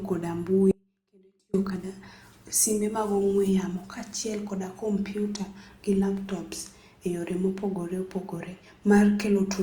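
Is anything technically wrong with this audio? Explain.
Yes. An audio dropout to a faint residue runs from 0.71 to 1.54 s: the speech likely lost its feed for about 825 ms while the downstream path stayed live. It cuts abruptly to a faint sound roughly 40 dB below normal, then returns just as suddenly.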